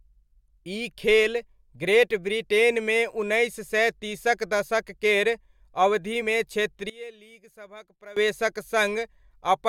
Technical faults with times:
6.21 compressed frames skipped
6.90-8.16 one channel inverted

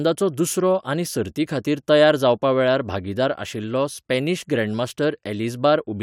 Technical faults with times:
none

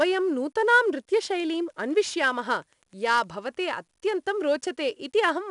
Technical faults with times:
0.00-5.50 4-bit ADPCM compression

